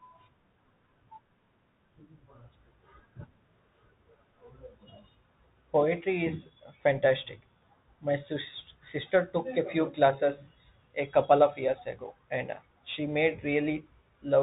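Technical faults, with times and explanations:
Throughout, Bluetooth CVSD headset codec: the speech is cut off above 4 kHz, s sounds turn scratchy, and granular hiss lies underneath, fitting a one-bit, 64 kbps delta stream whose adaptive step cannot keep up with loud, fast-changing high sounds.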